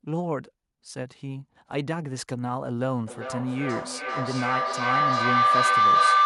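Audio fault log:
3.07 to 6.25 s, feedback howl: from here the sound starts feeding on itself. The loop from microphone to loudspeaker and back is adding level on every pass, so instead of dying away the repeats grow and narrow to a tone around 1 kHz, the frequency this loop favours. The repeats come roughly every 0.4 s, the time one trip around the loop takes, and it peaks about 10 dB above the speech. It never collapses, so it runs right to the end.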